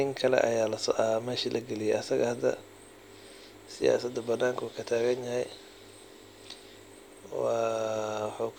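Nothing in this bit of speech jumps out as a technical fault, so there's nothing to flag along the way.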